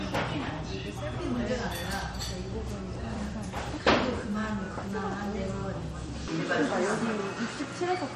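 From the first moment the audio carries plainly audible damage that sounds like MP3 compression, which fits a low bitrate in the region of 44 kbps. Nothing survives above 13.9 kHz, so a spectrogram shows a hard flat ceiling there, with patchy, flickering holes below it where weak frequency lines drop in and out between frames. The result is a watery, swirling texture, metallic chirps on bright transients, and attacks that smear instead of striking cleanly.

At 6.28 s the character changes abruptly and stays that way to the end. The likely cause is an input switched to a poorer device. There is no silent gap at the changeover. On a spectrogram the ceiling drops from 13.9 kHz to 11.4 kHz, leaving a visible step in the top edge, and a new noise floor appears some 35 dB beneath the signal. The waveform's envelope shifts by around 5 dB. The sound turns duller and boxier.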